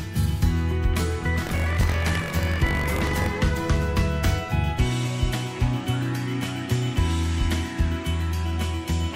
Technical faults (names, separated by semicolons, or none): buffer tearing